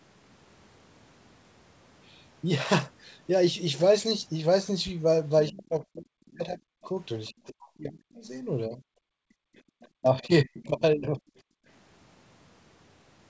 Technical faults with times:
4.87-4.91 loud pop
5.47-8.81 speech suppressed in double talk
5.72-5.76 other side's voice leaking through
7.26-7.32 other side's voice leaking through
9.09-9.66 background gated by the echo canceller
9.57-9.87 other side's voice leaking through
9.94-11.22 speech suppressed in double talk
11.50-11.67 background gated by the echo canceller

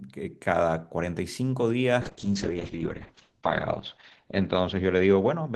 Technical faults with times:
2.02-5.55 call bitrate drop

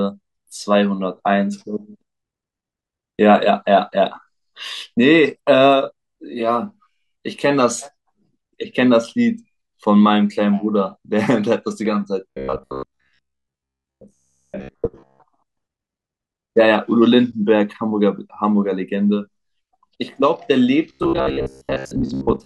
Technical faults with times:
12.30-15.21 robotic sound from repeated short buffers
20.89-22.45 robotic sound from repeated short buffers

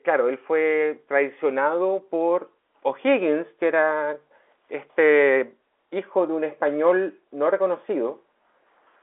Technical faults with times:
none

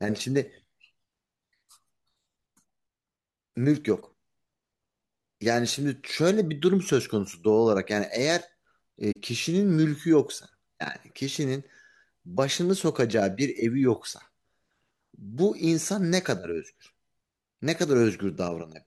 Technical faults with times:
9.11-9.17 AAC frame loss with muting

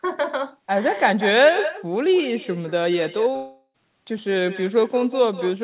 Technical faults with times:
0.00-5.63 echo with no canceller
3.36-3.76 long network dropout

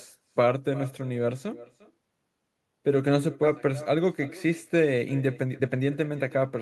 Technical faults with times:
0.00-6.61 echo with no canceller
3.43-3.45 skip ahead
5.22-6.46 jitter buffer speed-up

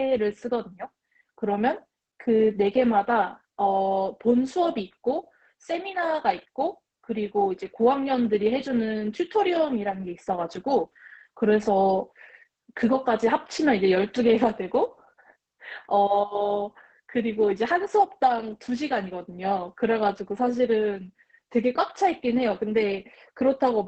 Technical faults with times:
0.00-23.87 Opus voice compression

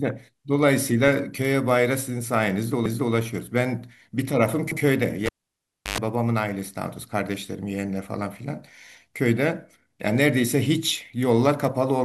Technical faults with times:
2.86-3.14 repeated frames
4.72-4.81 repeated frames
5.26-5.98 cable pulled and plugged in

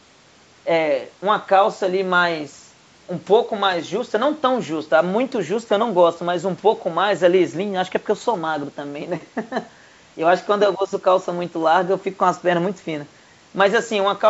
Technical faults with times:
none

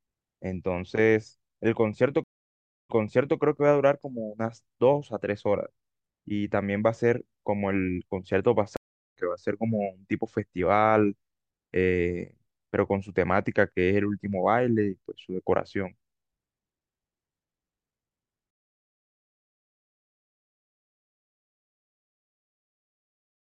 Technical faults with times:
2.24-3.38 stream reconnect
8.77-9.16 stream reconnect

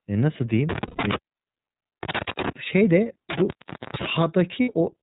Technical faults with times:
0.00-5.03 iLBC codec
0.69-2.49 intermittent contact
0.86-1.00 lost iLBC frames
3.30-4.10 intermittent contact
4.62-4.69 lost iLBC frames

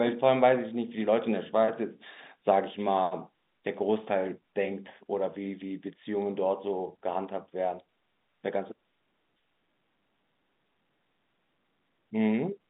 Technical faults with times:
none

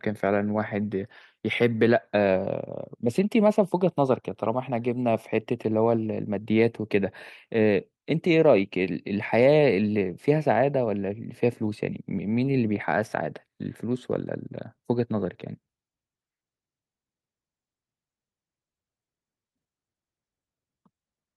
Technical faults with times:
none

